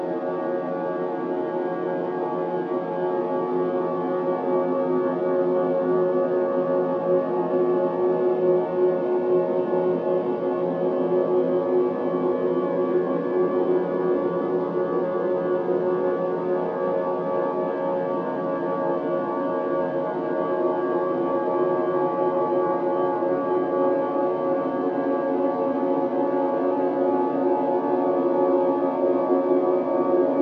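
No technical faults occur in these sounds, so there is nothing to describe in time order.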